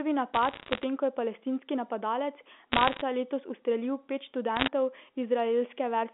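Bit errors on a digital phone line crackle through the speech at 0.34 to 0.84 s, 2.72 to 3.01 s and 4.56 to 4.68 s. Flipped bits, around 0.7 to 1 in a hundred, corrupt single A-law samples. Sign and high-bit hits give sharp ticks over the band-limited telephone speech.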